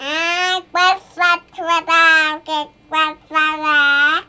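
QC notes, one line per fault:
No faults were found in the audio. Nothing here needs a QC line.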